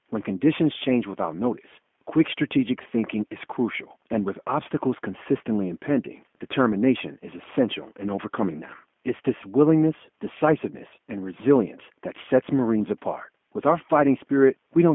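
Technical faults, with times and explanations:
Throughout, G.729 codec: the speech is confined to roughly 200 Hz to 3.4 kHz and rebuilt from a filter, pitch predictor and sparse pulses, which fits 8 kbit/s G.729A. Unlike simple narrowband filtering, this adds plainly audible roughness and a synthetic, buzzy texture.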